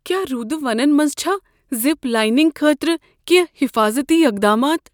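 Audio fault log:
Nothing to report here: this speech clip came through without any faults I could pick out.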